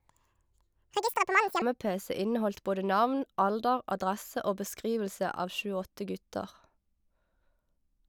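A section at the wrong speed runs from 0.0 to 1.62 s: the speech plays about 1.76 times too fast, so pitch rises by roughly ten semitones and the voice sounds high and hurried, likely because this stretch was played against the wrong clock before normal speed resumes.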